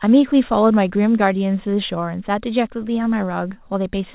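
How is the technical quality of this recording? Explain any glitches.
No glitches or faults audible.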